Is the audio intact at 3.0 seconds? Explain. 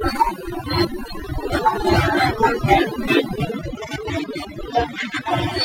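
No. Overdone noise removal affects the speech at 3.0 seconds, as it does throughout the clip. A noise reducer set far too aggressively pulls individual frequency bands down or cuts them out whenever they sit close to its noise estimate, and it takes the softer parts of the voice with them. The background drops and breaks up into twinkling, chirpy specks.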